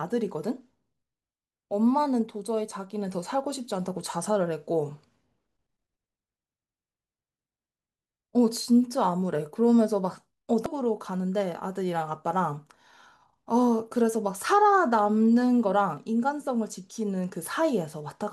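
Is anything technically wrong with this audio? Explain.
Yes. At 10.66 s, damaged data in the compressed stream makes the decoder misread a frame and resync, producing a brief glitch.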